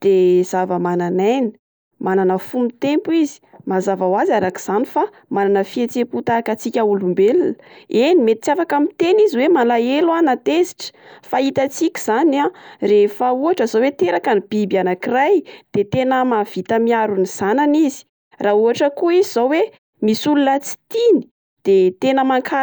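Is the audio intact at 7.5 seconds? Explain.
Yes, the speech at 7.5 seconds is intact, with no dropout, distortion or other fault at that moment.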